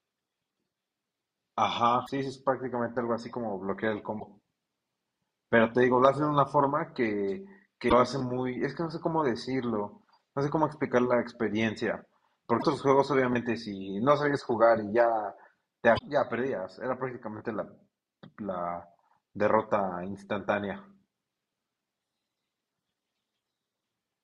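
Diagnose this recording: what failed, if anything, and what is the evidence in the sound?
Codec stage: damaged data in a compressed stream causes brief glitches at 2.03, 4.17, 7.86, 12.59 and 15.95 s. They show as broadband vertical smears where the decoder lost frame sync.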